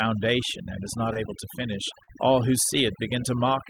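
Throughout the clip, overdone noise removal strips the background to near silence. Isolated bands are switched off, and quiet parts of the voice go with them. A spectrogram shows a black floor dotted with twinkling specks, and holes bitten out of the weaker harmonics.

From 1.13 to 1.17 s, a short concealed packet loss covers about 20 ms of missing audio with roughly 18 ms of extrapolated sound. It blurs briefly into a smear. The tail, 1.15 to 1.17 s, is a lost packet rebuilt from error correction: a 20 ms stretch played from a low-bitrate copy, so it sounds rougher and grainier. The same rebuilding recurs at 1.61 to 1.63 s.

A longer concealment, 2.03 to 2.09 s, falls just before "all who". It spans about 40 ms and is heard as a wobble, with a slightly smeared envelope on the waveform. Its last 20 ms, 2.07 to 2.09 s, is again rebuilt from the error-correction copy. Further 20 ms rebuilt frames follow at 2.17 to 2.19 s, also just before "all who", then 2.75 to 2.77 s, just after "all who", and 3.45 to 3.47 s. 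Each sounds momentarily coarse, and on the spectrogram each shows as a noisier, less sharply defined slice of harmonics.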